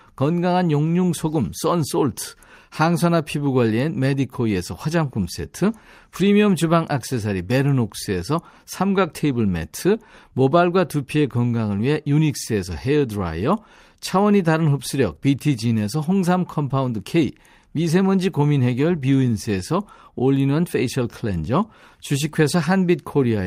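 No technical faults can be heard anywhere in this speech recording. Nothing in it stands out for comment at any point.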